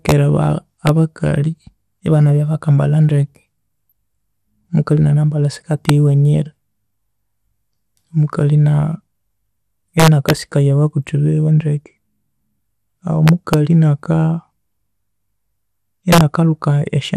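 MP2 compression runs through all 17 seconds of this speech, likely from MPEG Layer II coding at around 80 kbps. With so few bits spread across its 32 sub-bands, upper bands drop out and the remaining ones are coarsely quantised, so the voice sounds dull with a gurgling, granular edge that is plainly audible.

Integer overflow first cracks at 0.09–0.12 s and again at 0.87–0.89 s. Peaks pushed about 1 dB past the largest representable integer wrap to the opposite sign instead of being limited. Each one swings the waveform across the full range and snaps out far more harshly than clipping would.

DAB burbling appears at 3.90–3.92 s, right after "bakambalha ndeke", and again at 5.58–5.64 s, after "omukalhi enanambalha". Bit errors at a rate well under one percent get past error correction into the MP2 data and corrupt samples. The disturbance spreads over what sounds like a handful of frames, with short blips of noise in single sub-bands.

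Integer overflow returns at 5.89 s, then at 10.00–10.30 s just before "sikaya ababuthi biwe ndeke", at 13.28–13.54 s and at 16.12–16.21 s. In these three longer stretches the overdrive reaches about 2 dB and the wraparound cracks are correspondingly violent. A final single flip lands at 17.16 s, right at the end of the audio.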